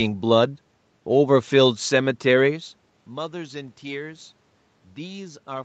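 Nothing stood out on listening to this speech clip as a technical fault.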